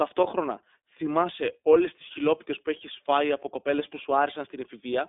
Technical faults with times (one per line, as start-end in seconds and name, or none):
0.00-5.09 iLBC codec